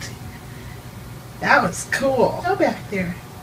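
At 2.43 s the sound jumps abruptly forward. A short blip marks the join, ending by 2.46 s. This is likely a stream segment skipped. One chunk of the stream failed to load, so the player moved straight to the next one.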